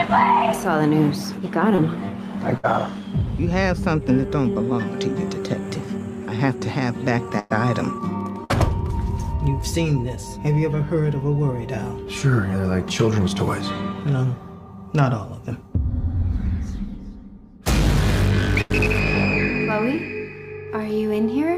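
At 1.75 to 1.80 s, short concealed packet loss leaves about 20 ms missing. The receiver bridges it by extending the preceding sound for roughly 21 ms, heard as a brief smear or wobble. Bursts of packet loss follow at 2.58 to 2.65 s (60 ms missing), 7.39 to 7.52 s (100 ms), 8.44 to 8.51 s (60 ms) and 18.61 to 18.72 s (80 ms). Each time the last sound is prolonged and decays, producing a held buzz or fading hiss before playback resumes past the lost span. A second short concealed loss at 19.96 to 19.99 s drops about 20 ms and patches roughly 15 ms, giving another brief wobble.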